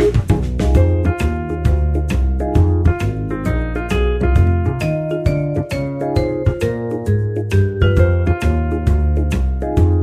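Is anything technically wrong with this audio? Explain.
No, nothing technically wrong stood out on listening to this audio.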